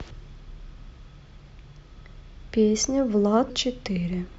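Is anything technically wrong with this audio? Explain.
Yes, there are compressed frames skipped in three places: at 0.30 s, 1.45 s and 3.49 s. The decoder drops whole frames, each 26.1 ms long, because they're missing or rejected as damaged, so the speech jumps ahead. The first two jumps lose about a tenth of a second each; the one at 3.49 s loses roughly a third of a second. Since neighbouring frames overlap, each join is a short smeared blip rather than a sharp click.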